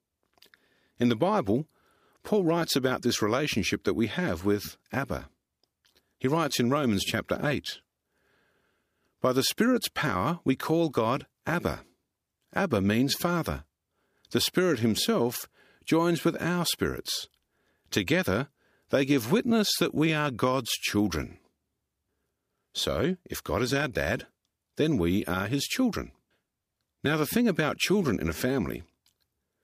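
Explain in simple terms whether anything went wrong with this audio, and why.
Nothing went wrong here: the speech comes across steady and even the whole way, with no glitches, dropouts or odd sounds to point to.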